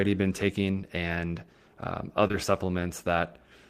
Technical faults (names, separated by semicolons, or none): short concealed packet loss